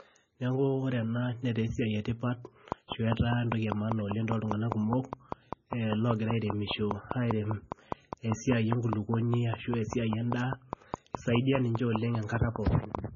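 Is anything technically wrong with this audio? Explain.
Yes, there are two faults.

A train of clicks runs from 2.72 to 12.96 s, starting just after "esiai etipat". Around fifty near-identical pulses arrive at a steady five per second, peaking about 15 dB above the speech. They are most likely interference or a struggling interface, and they are heard as regular ticking over the speech and through the pauses.

The whole clip shows low-bitrate audio saved at a high bitrate. Nothing is present above 6.9 kHz, and the speech carries a dull, smeared coding texture. This points to an MP3 first made at roughly 18 kbit/s and then likely re-encoded at 320 kbit/s. The second encoding cannot restore the discarded detail.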